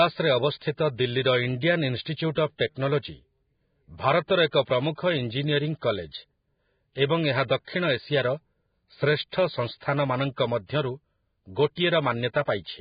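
Heavy lossy encoding, likely Vorbis compression at a very low setting that fits a bitrate near 16 kbps, affects the whole of this speech recording. The encoder discards everything above about 4.9 kHz and quantises the remaining treble so coarsely that its fine detail is replaced by noise of similar energy. As a result the speech sounds hissy and grainy from start to finish, with roughened tones and blurred attacks.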